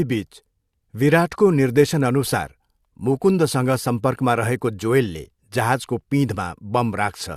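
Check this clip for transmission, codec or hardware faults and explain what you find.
No fault can be heard anywhere in the speech recording. Careful listening turns up nothing that calls for an explanation.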